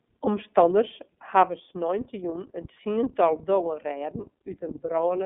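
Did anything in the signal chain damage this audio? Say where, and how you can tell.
Yes, at the codec stage: this speech has been through the iLBC codec for its whole length. Nothing gets past about 3.7 kHz, and the line band sits roughly 150 Hz to 3.5 kHz, so it's flat telephone-narrow. On top of that there's a plainly audible rough, slightly synthetic edge, because each frame's excitation is coded on its own without leaning on the previous frame. That fits 30 ms frames at the 13.33 kbps mode.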